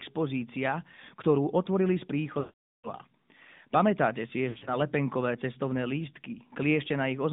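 The whole clip of speech carries the AMR narrowband mobile codec. Its band runs from about 150 Hz to 3.7 kHz, so there is no air above that. Each 20 ms frame is rebuilt from a vocal-tract model fed by a few pulses. The damage is plainly audible: a buzzy, synthetic edge on the voice. The sound fits the 10.2 kbps mode.

From 2.40 to 2.88 s there are lost AMR speech frames. Frames failed their checks, and the decoder kept repeating the last good pitch and tract settings at falling gain. Over this 440 ms run the voice smears into a drawn-out tone and fades to silence. It returns weak or rough.

From 4.50 to 4.77 s more frames drop, in short scattered gaps over about 160 ms. The longest gap is 60 ms. Each one gives a quick dip or warble rather than a full fade.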